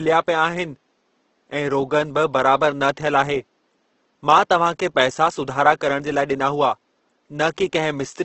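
From start to finish the speech sounds rough and grainy, with a noisy, sandy texture on sustained sounds, even though the full bandwidth is kept. This is most likely Opus compression in its music (CELT) mode at a low bitrate, fitting roughly 16 kbps, where too few bits are left for the bands and they get filled with folded or noise-like content. The faint room noise sits about 48 dB below the speech.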